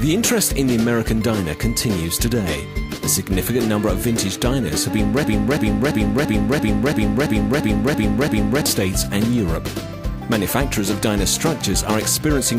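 From 5.24 s to 8.66 s the audio falls into a broken-record loop: a fragment of about 0.34 s plays ten times back to back, identically, before normal sound returns. The stall was likely in the player, encoder or stream, which kept resending the last piece it held, so the audio meant for those seconds is gone. On a waveform the same shape repeats at a fixed 0.34 s spacing; a spectrogram shows identical vertical stripes of texture.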